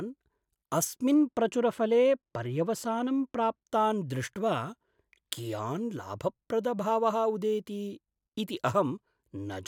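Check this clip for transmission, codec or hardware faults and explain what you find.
One fault is present. From 1.14 to 3.61 s, de-emphasis applied wrongly rolls the treble off smoothly, about 10 dB down at 10 kHz, leaving the speech dull and muffled.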